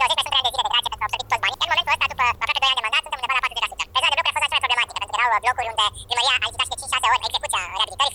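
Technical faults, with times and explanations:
Throughout: audio read two samples at a time (double speed). Everything plays twice as fast and a full octave higher. The reader consumed sample pairs as single frames, doubling playback rate.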